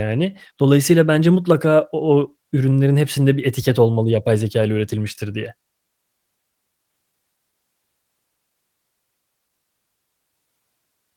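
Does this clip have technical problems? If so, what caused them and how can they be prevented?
No, nothing in this speech recording stands out as a technical problem, so there's nothing here that needs preventing.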